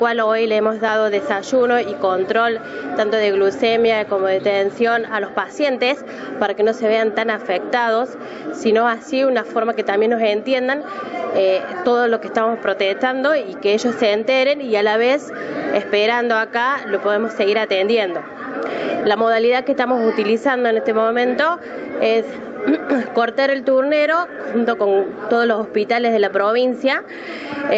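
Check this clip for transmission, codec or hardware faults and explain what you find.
No transmission, codec or hardware fault can be heard anywhere in the clip. The sound stops at about 8 kHz, which fits the normal bandwidth of an Opus call passing through a call's microphone processing and a WebRTC call path.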